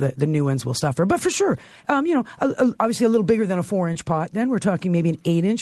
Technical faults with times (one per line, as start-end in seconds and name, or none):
0.79-0.83 short concealed packet loss
3.93-3.97 short concealed packet loss